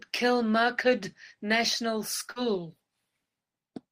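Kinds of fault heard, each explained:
Short concealed packet loss: about 40 ms of the speech did not arrive in time, so the receiver synthesised roughly 41 ms of fill by extending the preceding sound, then crossfaded back into real audio; it is heard as a brief smear between 2.31 and 2.39 s.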